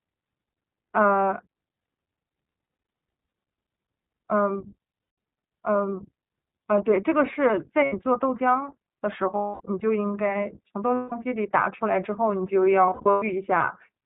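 iLBC codec, throughout: the speech has nothing above 4 kHz and sounds somewhat rough and synthetic, with plainly audible coding damage. This fits iLBC at 15.2 kbps with 20 ms frames, each coded on its own without relying on the previous frame.

Lost iLBC frames at 3.28, 5.02, 7.84, 9.36, 10.94 and 12.86 s, lasting 40, 160, 80, 240, 180 and 260 ms. The last loss is scattered over 360 ms, with its longest run around a tenth of a second. Each gap is filled by repeating the last pitch cycle mixed with noise, which sounds like a held, buzzy vowel that fades on longer gaps. Speech recovers almost at once.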